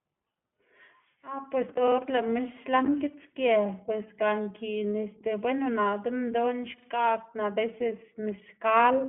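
From start to finish the speech carries the character of the iLBC codec, a narrowband VoIP coder working in 20 ms frames, each frame's excitation coded on its own. The band is a telephone line's, roughly 150 Hz to 3.4 kHz, with nothing above 3.7 kHz. The damage is plainly audible: a rough, slightly synthetic edge on the voice. On a spectrogram the energy stops at a flat ceiling.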